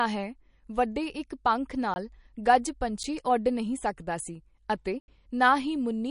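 From the start, the speech carries damage that is likely from MP3 compression at a low bitrate, around 40 kbps. Short of bits, the encoder discarded everything above 10.6 kHz and zeroed weaker frequency lines that flicker on and off between frames. The voice therefore sounds dull at the top and watery, with a swirling, metallic edge on sibilants and softened consonant onsets, plainly audible across the whole clip.

Three blocks of digital silence follow, where runs of samples were replaced by zeros, as happens when the output buffer is not filled in time. At 1.94 to 1.96 s a 20 ms hole opens. At 3.03 s an 8 ms gap just before "ਓੱਡ ਨਹੀਂ ਸਕਦਾ ਸੀ" is brief enough to register as a single tick. At 5.00 to 5.08 s, right after "ਨਹੀਂ ਸਕਦਾ ਸੀ ਅਤੇ", an 80 ms dropout leaves an obvious gap.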